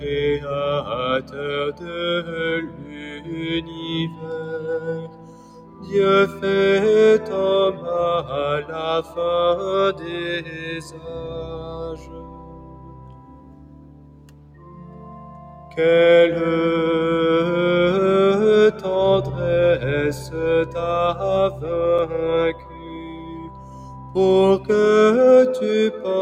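A noise suppressor designed for speech stays active through the whole recording, treating sustained material, ambience and decays as noise. Its gain swings by roughly 10 dB, so attacks mostly come through while held sounds and tails are pulled down, giving a pumping, thinned quality. The noise suppressor cuts the sound most clearly at 1.21–1.38 s, 1.72–2.32 s, 2.66–4.3 s, 5.01–5.93 s, 10.41–15.77 s and 22.53–24.16 s, with the deepest drops about 7 to 8 dB. The longest stretch, from 10.41 to 15.77 s, has around five seconds of sustained sound sinking beneath its onsets. Shorter stretches, such as the one ending at 1.38 s, lose only a fraction of a second. In each case the decaying part is shortened or lowered rather than removed outright. Separately, a block of digital silence occurs at 21.98 s, a 5.33 ms hole where the sound cuts out and returns with no fade. The abrupt edges produce a click or tick rather than an audible gap. 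The length matches a 256-sample block at 48 kHz, which points to an output buffer that was not filled in time.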